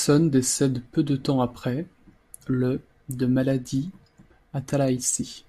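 Just a short bit of speech here, and nothing technically wrong turns up anywhere in it.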